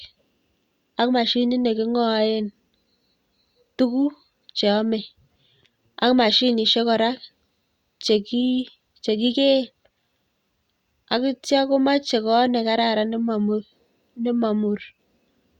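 Nothing here calls for comment, since the speech carries on with no technical faults to point out.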